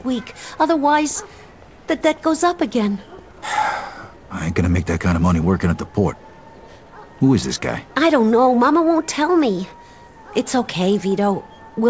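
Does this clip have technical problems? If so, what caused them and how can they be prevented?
No, nothing here needs fixing: the audio shows only the expected character of a WebRTC call path, with no content above 8 kHz, consistent with a wideband codec such as G.722 at 64 kbps.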